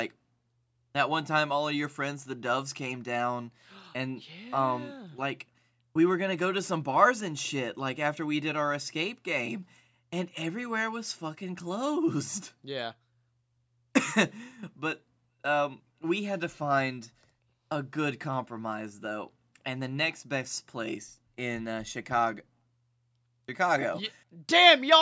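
No technical faults can be heard in this speech.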